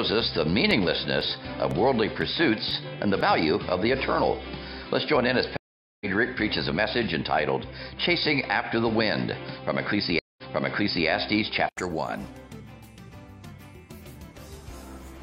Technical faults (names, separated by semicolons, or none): input switched to a poorer device; periodic USB or driver dropouts; stream reconnect